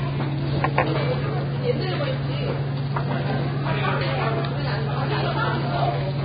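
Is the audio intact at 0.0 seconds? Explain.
No, at 0.0 seconds the sound already shows heavy damage likely from Vorbis compression at a low bitrate around 16 kbps, with nothing above 4.9 kHz and grainy, hissy treble throughout.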